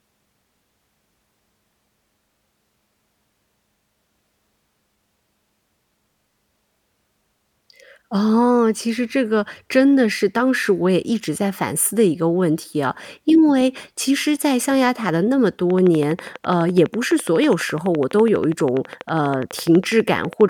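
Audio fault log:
15.70 to 20.42 s, train of clicks: a regular ticking at about 12.1 clicks per second runs over the speech, roughly fifty near-identical pulses standing a few decibels above the signal. The steady repetition likely comes from electrical interference or a faulty connection or power supply injecting pulses.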